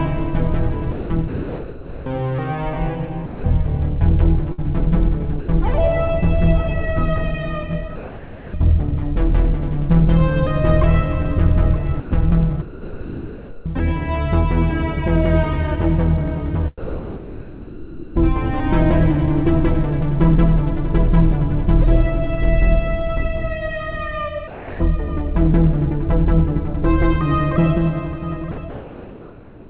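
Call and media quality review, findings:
Sound chopped by the voice detector. Sender-side VAD likely toggling transmit on/off repeatedly. 0.92–5.48 s: about 1.3 s of sound swapped for comfort noise, giving choppy audio. 12.00–13.66 s: same pattern, about 1.2 s replaced. Quiet onsets and tails misjudged as background and gated out.

Sound dropped by the voice detector. Sender VAD likely classing low-level sound as background and halting transmission, with the receiver filling in comfort noise until retrigger. 7.96–8.54 s: 0.58 s filled, 0.28 s of real sound lost. 16.78–18.16 s: 1.38 s filled, 1.18 s lost, the longest gap. 24.48–24.80 s: 0.32 s filled, 0.21 s lost. 28.52–28.58 s: 60 ms filled, 40 ms lost.

Comfort noise in place of the background. DTX likely active after the last detected sound, so no real frames were sent, only occasional noise updates. 28.52 s to end: real background replaced by about 1.06 s of steady, featureless synthetic noise. 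Band-limited like the rest of the clip, nothing above 4 kHz, which fits a narrowband call codec.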